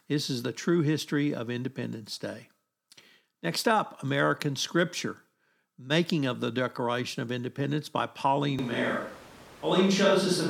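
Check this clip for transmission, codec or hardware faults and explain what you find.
One fault is present. From 8.59 s to the end, there is a sudden switch to a distant microphone, likely because the close mic failed. The speech turns hollow and roomy. The spectrogram shows thinner bass and a noise floor about 25 dB below the speech, while the waveform level stays about the same.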